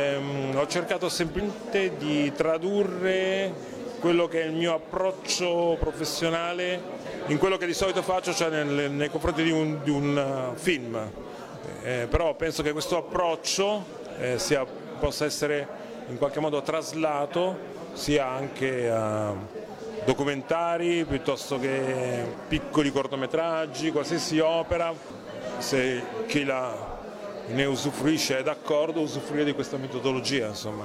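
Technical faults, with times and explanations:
1.35–1.41 s, damaged data in a compressed stream: corrupted bytes leave the decoder misreading frames and losing sync until it finds the next valid header, producing a brief blip. On a spectrogram it shows as a 60 ms disruption; the waveform breaks discontinuously.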